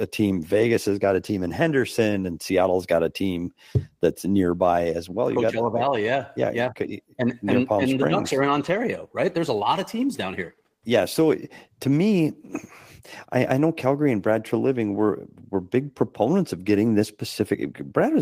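No technical faults can be heard anywhere in the recording.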